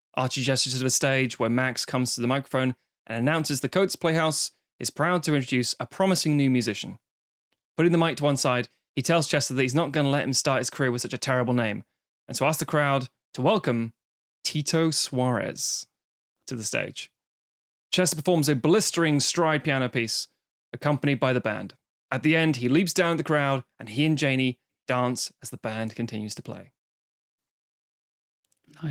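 No faults heard in the speech; the Opus voice compression at 24 kbps in hybrid mode leaves only light codec coloration.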